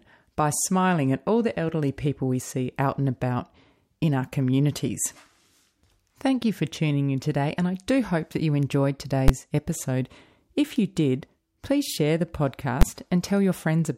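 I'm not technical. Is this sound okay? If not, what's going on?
No. There are two sharp, very loud bangs in the speech, one at 9.28 s and one at 12.82 s. These are invalid numbers at full scale: a calculation failed, and for about a hundredth of a second the sound was forced to one extreme value, far beyond the speech's peaks.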